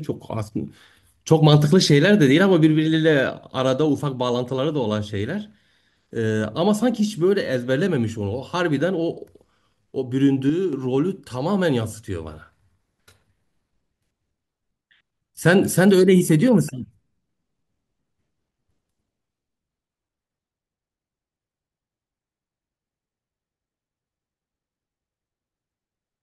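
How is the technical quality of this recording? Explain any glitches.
One glitch stands out. From 10.50 to 10.73 s there is a sudden gain jump: the level of the speech and the background noise falls together by about 6 dB, then returns. The abrupt step, with no fade, most likely comes from a digital gain setting applied instantly between adjacent samples.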